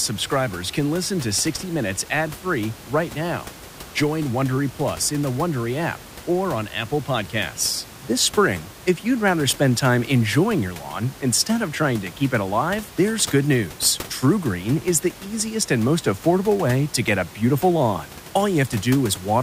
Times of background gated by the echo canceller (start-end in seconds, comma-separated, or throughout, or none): none